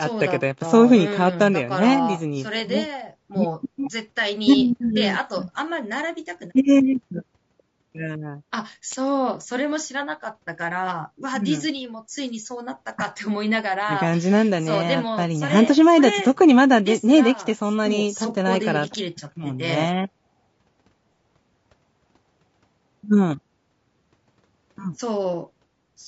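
From start to finish the speech has a rough, grainy edge, with noise filling in between the pitch harmonics and a thin, somewhat synthetic top band. That's likely low-delay AAC compression: its short frames blur the harmonics, and the damage fits a stream around 32 kbps.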